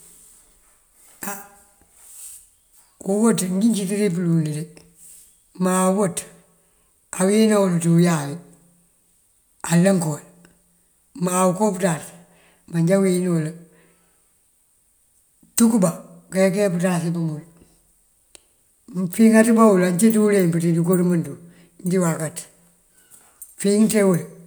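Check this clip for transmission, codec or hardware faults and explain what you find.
The speech signal stays continuous and stable throughout, and nothing in it points to a problem in how it was sent, encoded or recorded.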